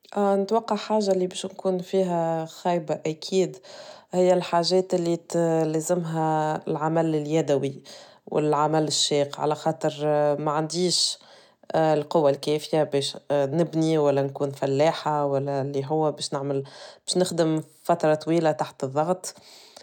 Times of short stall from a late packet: none

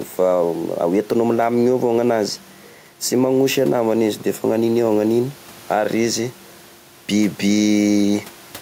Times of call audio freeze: none

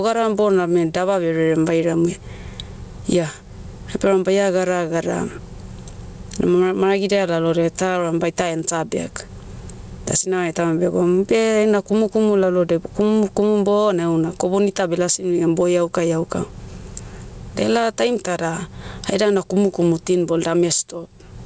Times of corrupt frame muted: none

